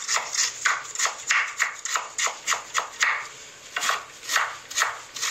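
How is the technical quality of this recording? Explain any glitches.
The technical quality is degraded by generation loss throughout: swirly, smeared, hollow texture with blurred attacks and nothing above 16.1 kHz, likely from about ten passes through MP3 at around 96 kbit/s.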